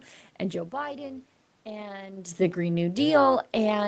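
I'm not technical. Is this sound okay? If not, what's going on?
No. Throughout, the voice has a rough, robotic buzz or flutter. That's overlap-add ripple: the sound was chopped into short overlapping pieces that were rejoined unevenly, so the level wobbles very fast, well over a hundred times a second.

From 0.81 to 2.41 s, voice and background slowly swell together. That's automatic gain rising: the volume control heard the input drop and gradually turned it up.

From 2.41 s to the end, everything gradually sinks again. That's automatic gain falling: the control judged the sound too loud, or its background noise too strong, and eased the volume back down. The talker's own shifts in distance, around 0.5 and 2.0 s, are natural and not faults.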